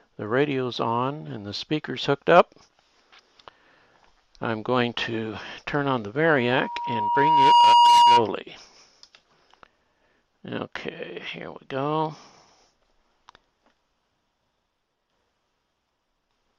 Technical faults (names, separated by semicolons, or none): loudspeaker feedback squeal